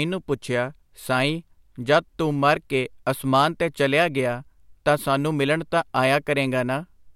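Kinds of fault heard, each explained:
Nothing stood out on listening to this speech recording.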